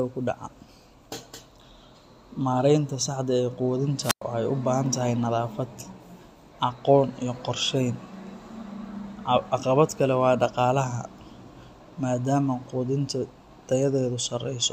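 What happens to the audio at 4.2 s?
A wireless microphone squelch dropout runs from 4.02 to 4.22 s: the radio link fades, hiss swells briefly, then the receiver's squelch mutes the output for about 104 ms before the speech returns. The rising static, not a clean digital gap, marks it.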